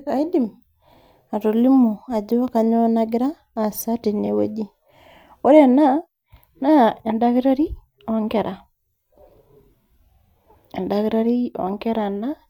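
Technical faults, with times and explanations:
4.25 to 4.28 s, repeated frames: A tiny slice of the speech plays twice, giving a brief stutter. The repeated block is 13.1 ms, which fits a single compressed frame sent twice. The clip runs 23.2 ms longer.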